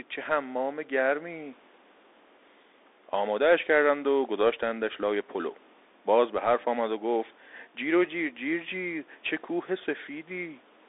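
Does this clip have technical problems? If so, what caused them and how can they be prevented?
Yes. The speech passes through a Bluetooth CVSD headset codec for its entire length. Audio is confined to roughly 250 Hz to 3.7 kHz, with nothing above 3.8 kHz, so it sounds thin and boxy. CVSD sends one up-or-down bit per sample and adapts its step size. Fast high-frequency detail outruns that step, which leaves plainly audible damage: scratchy s sounds and a granular hiss under the speech, consistent with a 64 kbps CVSD link. The room noise, about 32 dB below the speech, is simply the recording environment. To prevent this, record over a wired microphone or a wideband Bluetooth mode such as mSBC or LC3 instead of the narrowband call profile.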